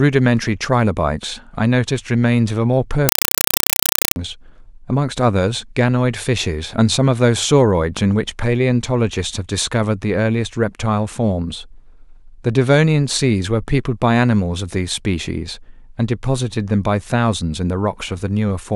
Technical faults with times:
3.09-4.16 compressed stream played as audio

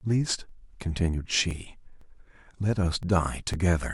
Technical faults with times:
0.49 overlapping chunks
1.00 overlapping chunks
1.51 overlapping chunks
2.01 overlapping chunks
2.52 overlapping chunks
3.03 overlapping chunks
3.54 overlapping chunks

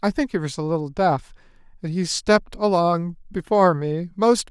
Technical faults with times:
none

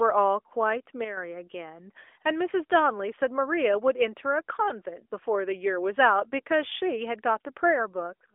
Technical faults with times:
1.04-1.17 sudden gain jump

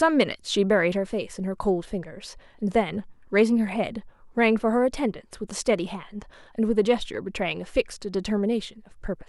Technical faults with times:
none

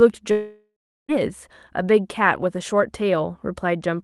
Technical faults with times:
0.31-1.11 long network dropout

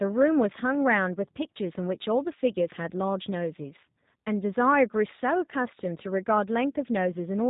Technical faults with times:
0.00-7.50 G.729 codec

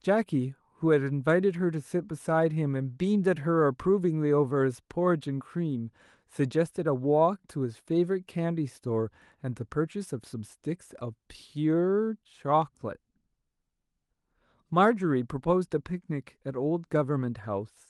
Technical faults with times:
none

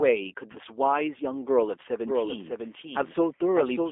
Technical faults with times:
0.00-3.92 G.729 codec
0.52-0.58 VoIP packet loss concealed by the speech codec
2.04-3.92 doubled audio track

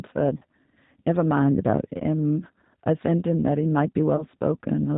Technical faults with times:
0.00-4.98 G.729 codec
0.37-0.43 VoIP packet loss concealed by the speech codec
1.98-2.01 VoIP packet loss concealed by the speech codec
4.16-4.25 VoIP packet loss concealed by the speech codec

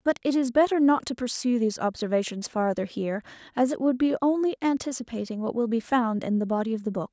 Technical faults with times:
none

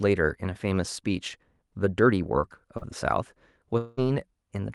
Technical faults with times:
2.77-2.83 short concealed packet loss
3.77-3.99 long network dropout

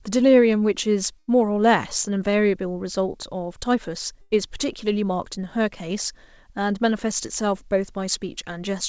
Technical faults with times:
1.19-1.30 burst of packet loss
4.21-4.34 burst of packet loss

